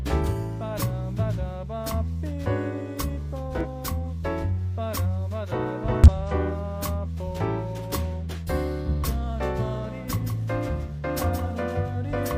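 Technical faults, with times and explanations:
3.61–3.66 s and 6.04–6.08 s: damaged data in a compressed stream. Corrupted frames throw the decoder out of sync, giving brief glitches while it finds the next valid frame.
9.85 s to the end: doubled audio track. A second full-band copy enters abruptly, around 150 ms late and roughly 10 dB quieter, with no decay, likely from a second, slower capture path.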